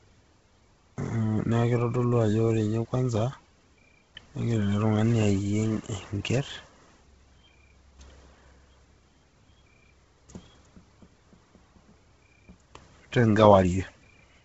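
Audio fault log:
Throughout, Bluetooth LC3 compression: the speech sounds heavily breathy and grainy with nothing above 7.7 kHz, likely a low-bitrate LC3 link noise-filling its stripped upper band.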